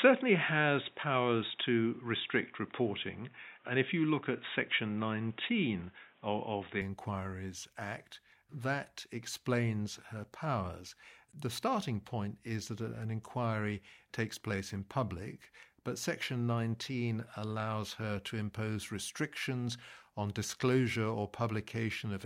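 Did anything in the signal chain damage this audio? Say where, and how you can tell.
Yes, at the input device: from 0.0 to 6.81 s the speech stops at 3.8 kHz, with its own faint background noise and a level about 5 dB off. This is likely an input switched to a poorer device, not a codec bandwidth cut, which wouldn't change the noise and level.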